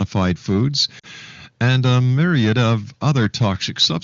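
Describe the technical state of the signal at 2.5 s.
At 2.5 s the signal is in the middle of a stretch of clipping from 1.62 to 2.75 s, most likely microphone overload. The input gain appears set too high, so the loudest peaks run about 5 dB past what the converter can represent and have their tops sheared flat. A few percent of the samples in that span are affected. The flattened waveform adds a harsh, crackling edge to the loudest syllables.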